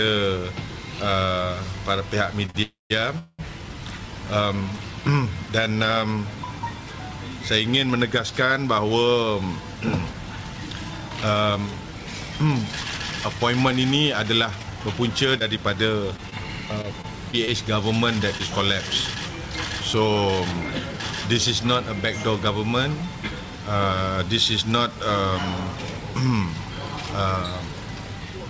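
Short stalls from a late packet at 2.46 to 2.50 s and 2.50 to 2.56 s: packets arrived behind schedule, the jitter buffer emptied, and the receiver held the last sound for 21 ms and then 44 ms before resuming. Nothing is lost, but the sound drags slightly with a faint buzz.

Call audio freezes at 2.62 to 2.92 s and 3.18 to 3.41 s: the sound stops and continues as a fading buzz, going silent for about 160 ms in the first and 30 ms in the second, adding 278 ms and 205 ms of gap. Held-up packets draining the jitter buffer are the likely cause.

Jitter buffer speed-up at 14.30 to 16.12 s: with extra audio queued, the receiver trimmed tiny pitch-period slices repeatedly, running at 109% to shed roughly 0.2 s. The audio sounds slightly hurried while its pitch stays unchanged.

Scattered short gaps from 15.39 to 18.41 s, overlapping both speed-ups: around seven lost or late packets, none much longer than 20 ms, were each patched by extending the preceding sound. 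The result is brief ticks and small smears dotted through the stretch, with 160 ms missing in total.

Jitter buffer speed-up again at 18.32 to 20.94 s, now at 110%, removing roughly 0.3 s and giving the same rushed feel at unchanged pitch. Throughout, the G.722 call path leaves nothing above 8 kHz.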